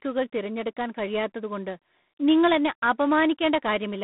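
From start to finish the speech carries G.726 ADPCM damage: a harsh, rasping hiss that rises and falls with the speech level, which fits 24 kbit/s coding with too few bits per sample. The band runs about 150 Hz to 3.7 kHz, with nothing above 3.9 kHz.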